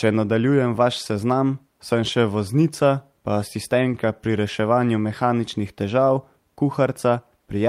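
Nothing goes wrong anywhere in this bit of speech, so there are no technical faults to point out along the way.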